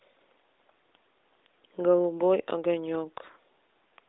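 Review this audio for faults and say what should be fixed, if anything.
Nothing here needs fixing; there are no faults to chase down in this recording.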